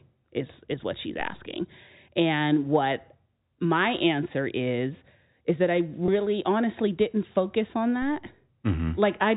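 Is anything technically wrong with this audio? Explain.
Yes, two faults stand out in this speech recording.

At 6.06 s there is packet loss with pitch repetition. About 20 ms of audio went missing, which fits a single lost packet. The receiver filled the gap by repeating the last pitch period, so there is a brief, slightly held buzz. On a spectrogram the harmonics run flat and unchanging for that instant.

At 8.02 s comes a DC step. The waveform's zero line jumps abruptly and is heard as a low thump while the speech carries on. A high-pass filter at about 2 Hz then pulls the offset back toward zero, so the waveform shows a sudden shift that slowly drifts back.

The G.711 telephone path caps the bandwidth at 4 kHz, which shows as an empty band above that line on a spectrogram.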